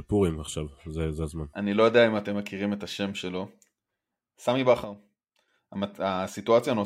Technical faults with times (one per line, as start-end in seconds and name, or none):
4.84-5.48 sudden gain jump